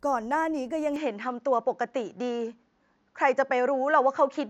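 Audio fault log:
0.96–4.49 s, input switched to a poorer device: from 0.96 s to the end, the speech loses everything above 7.3 kHz and turns duller and boxier, with no gap at the change and roughly the same level. A faint new background noise, far below the speech, appears at the same moment. The abrupt drop in bandwidth together with a different noise floor is likely the recording input moving to a second, narrower-band microphone or a headset's call profile.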